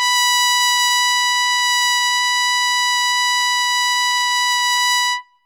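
Listening through this piece of music, nothing stood out as a technical fault.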